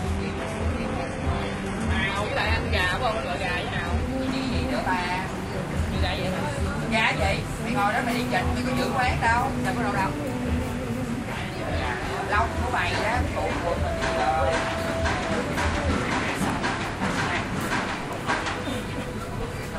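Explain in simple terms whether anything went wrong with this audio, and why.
The first 4 seconds sound dull and smeary, then abruptly clear up: an adaptive stream starting at a low bitrate, upgrading once the connection was measured.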